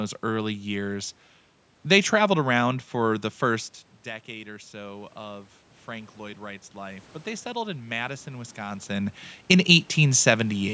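Automatic gain rising affects this speech recording from 6.17 to 8.87 s. After the input level fell by about 15 dB, the gain control slowly raised its gain by about 4 dB, so the voice and the room noise swell together over nearly three seconds.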